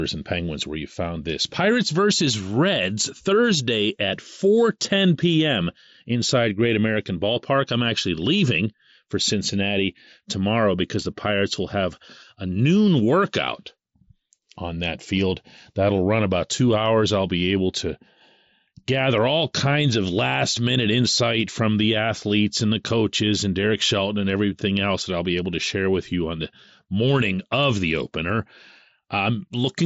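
No technical faults occur in this speech, which comes through a Bluetooth mSBC headset link working as designed with nothing above 7.7 kHz.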